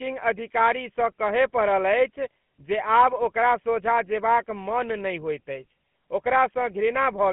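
GSM full-rate codec coding runs throughout the speech. The vocal tract is modelled and driven by coarsely sampled pulse excitation, consistent with a 13 kbps GSM stream, giving a plainly audible buzzy, gravelly roughness, with the band held to about 150 Hz to 3.4 kHz and nothing above 3.8 kHz.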